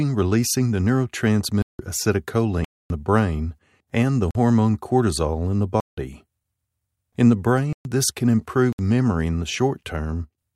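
Speech broken by six blocks of digital silence, at 1.62–1.79 s, 2.65–2.90 s (just before "the brain and the"), 4.31–4.35 s (after "the brain and the", before "cortisol in the"), 5.80–5.97 s, 7.73–7.85 s and 8.73–8.79 s (between "this can" and "memory in the"). The sound cuts out abruptly with no fade. The two 171 ms holes fit an unfilled 8192-sample buffer. Each appears as a flat, near-silent stretch in the waveform and a blank vertical band in the spectrogram.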